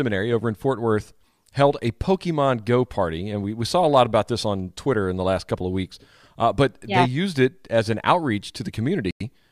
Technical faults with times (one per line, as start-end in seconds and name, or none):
9.11-9.20 Bluetooth stall